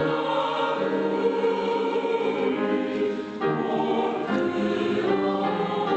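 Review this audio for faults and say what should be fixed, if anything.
No faults turn up in this audio, so nothing needs to be fixed.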